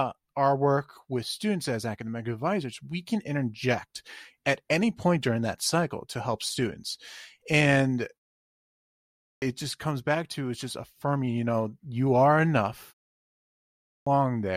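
Clipped start after a pause at 8.85 to 9.42 s and again at 13.42 to 14.07 s: after pauses of 0.74 s and 0.57 s, the output path has dropped into an idle state and needs time to wake before it passes audio again. About 570 ms is lost just before "just comes back to", and about 645 ms after "know you are enough", so speech bursts in abruptly with its opening sounds missing.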